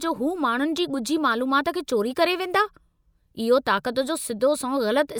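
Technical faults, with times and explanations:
No technical faults can be heard anywhere in the speech; the signal stays intact and steady over its whole duration.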